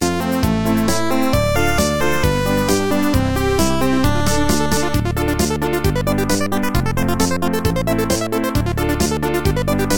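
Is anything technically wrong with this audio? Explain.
No, this music clip comes through with nothing technically wrong that can be heard in the signal.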